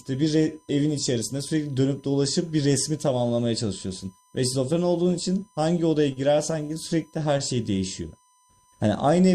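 A steady USB whine at 1 kHz sits under the speech throughout, roughly 35 dB below it. Current pulses from 1 ms USB frames are leaking into the audio through power or ground.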